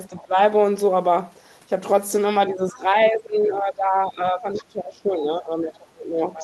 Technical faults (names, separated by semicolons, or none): speech suppressed in double talk; other side's voice leaking through